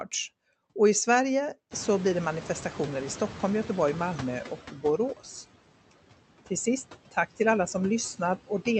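Noise suppressor artifacts run through the whole recording. The suppressor judges which frequency bands hold steady noise and pulls them down frame by frame, by about 17 dB. The background therefore dips in the gaps and comes back up under the speech.

From 1.7 s to 4.61 s the noise suppressor is catching up. The room noise jumps by about 23 dB at roughly 1.5 s, and the suppressor's noise estimate is still tuned to the quieter background from before. For a while the louder noise gets only about 9 dB of reduction. Over some 2.9 s the estimate adapts, and the background gradually sinks to its suppressed level.

Between 4.72 s and 4.99 s there is speech cut by the noise suppressor. For a brief moment the suppressor mistakes part of the speech for background and turns it down with the noise, by about 10 dB at the deepest point. The affected parts add up to about a tenth of a second and sound swallowed or faint against the speech around them. 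This happens over a call path whose Opus coding limits the audio to about 8 kHz.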